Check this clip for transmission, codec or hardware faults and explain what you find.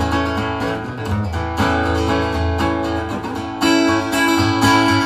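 Nothing in this clip points to a transmission, codec or hardware fault. The audio runs without any audible disturbance that would call for further explanation.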